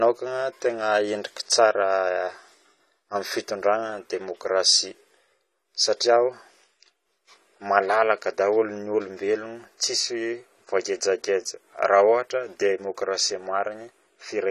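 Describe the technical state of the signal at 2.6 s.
At 2.6 s the signal carries the same damage heard across the whole clip: nothing above 13.9 kHz, a dull, smeared top end, and a warbling, fizzy texture on sustained sounds and sibilants. This is likely AAC compression, consistent with a low bitrate around 32 kbps, where the encoder drops high bands and leaves gaps in the spectrum. A plain low-pass filter would dull the sound without adding that swirling, time-varying fizz.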